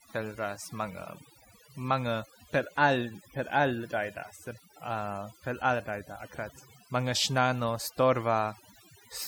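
Speech with overdone noise removal throughout: the background drops and breaks up into twinkling specks, and a spectrogram shows scattered isolated bright dots in an otherwise empty floor.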